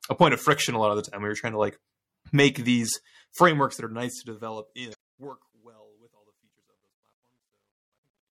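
Throughout the speech there is a watery, swirling quality, with sibilants breaking into metallic chirps and consonant attacks softened, and the top end dulled. That combination most likely comes from MP3 compression at a low bitrate, around 64 kbps, where the encoder runs short of bits, drops the treble above a fixed cut-off and lets weak frequency components flicker on and off from frame to frame. Here the damage is plainly audible.

From 3.43 s, just after "to like make these", the level begins a fade-out, starting around three and a half seconds and ending at 8.31 s. As it drops, the sound turns grainy and rough. This is truncation distortion on a fade: the gain stage keeps too few bits, which points to roughly 12-bit resolution, and applies no dither. Near the lowest steps the waveform collapses into coarse stairs.

Between 4.91 and 4.95 s a short blip cuts through. That is damaged data in a compressed stream. 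Part of the coded audio is corrupt, so the decoder misreads those frames, loses its place and resynchronises on the next valid frame header.

From 5.56 s to 8.31 s, the truncation is at its worst. The quiet tail of the fade turns gritty as the signal falls toward the smallest representable step.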